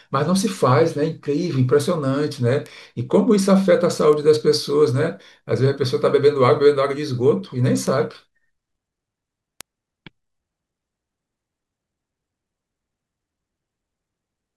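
Bit error spikes land at 2.66, 4.13, 7.87 and 9.61 s in this speech clip, each a single sharp tick that stands apart from the talking and spreads across the whole spectrum. Their shortness fits a flipped bit in memory or on a digital link corrupting one or two samples: the value leaps by a power of two and snaps straight back. The first three peak at about -12 dBFS; the last is louder, at about -6 dBFS.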